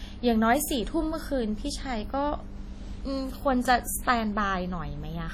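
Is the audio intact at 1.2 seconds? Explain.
No. At 1.2 seconds the speech sounds ringing and washy, with hiss breathing alongside it, as throughout the clip; likely WMA compression, heavy enough to suggest about 32 kbps.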